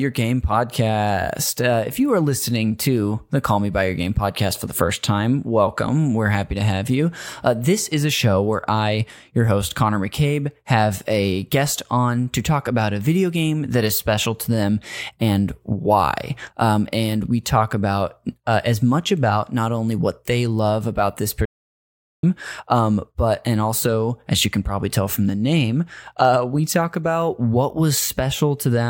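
At 21.45 s the speech cuts to silence for about 780 ms, resuming at 22.23 s. This playback stall likely came from the player running out of data.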